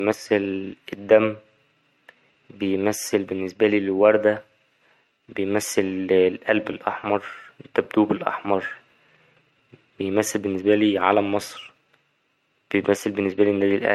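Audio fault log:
Throughout: low-bitrate audio saved at a high bitrate. The speech has nothing above 16 kHz. That hard ceiling and the coarse detail fit an MP3 first encoded at a low rate, around 72 kbit/s. The file was likely then re-saved as MP3 at a much higher rate, near 256 kbit/s. The second pass cannot restore the removed highs. It only keeps the damage already done.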